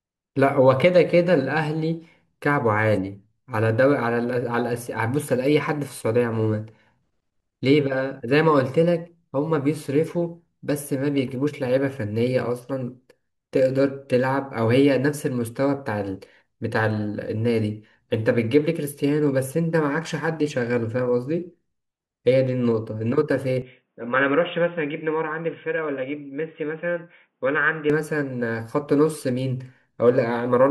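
A speech recording that abruptly turns dull and boxy at 23.62 s, with no gap, then clears again at 27.90 s. Across that stretch nothing remains above 3.6 kHz, the level falls by about 5 dB, and a faint new background noise appears far below the speech. This is likely an input switched to a poorer device, with capture handed briefly to a narrower-band microphone carrying its own tone, gain and noise floor.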